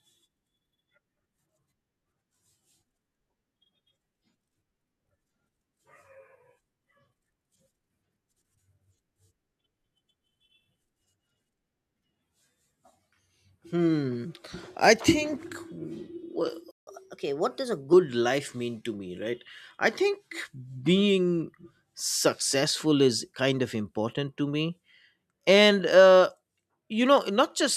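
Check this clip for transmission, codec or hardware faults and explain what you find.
Two related playback faults occur in this speech clip, back to back around 17 s.

From 16.71 to 16.87 s there is a playback stall: the speech cuts to silence for about 160 ms, then resumes where it stopped. The likely cause is the player's buffer running dry or its output thread being blocked briefly, so no samples reached the output.

From 16.87 to 17.93 s comes catch-up at higher speed: the player resamples its backlog at 1.15 times normal rate, so the speech runs faster and sits roughly two semitones higher on "life mean to me", then settles back to normal.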